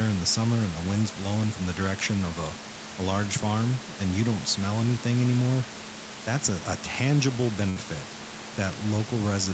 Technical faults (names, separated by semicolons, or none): burst of packet loss